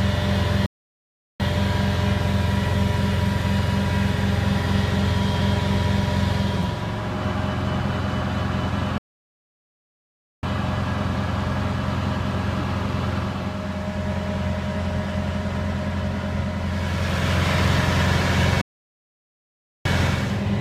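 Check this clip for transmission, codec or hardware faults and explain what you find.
Three playback stalls. At 0.66 s, 8.98 s and 18.61 s, the sound cuts out mid-flow and stays silent for 0.74 s, 1.45 s and 1.24 s. The player likely ran short of data or was blocked, then resumed once it recovered.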